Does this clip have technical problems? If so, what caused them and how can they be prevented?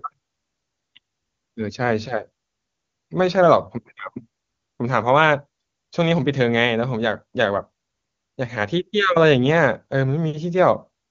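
No, nothing in this speech recording stood out as a technical problem on listening, so there is nothing here that needs preventing.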